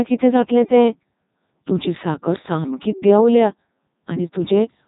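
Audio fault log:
throughout, Codec 2 vocoder: the speech has a robotic, buzzy quality because the decoder rebuilds it from sine waves using only pitch, voicing, energy and a coarse spectral envelope, discarding the original waveform. The damage is heavy, even at Codec 2's top 3.2 kbit/s mode. A spectrogram shows evenly stacked harmonic lines with smeared, blocky formants and nothing above 3.8 kHz. The waveform looks smooth and periodic, lacking the irregular fine detail of natural speech.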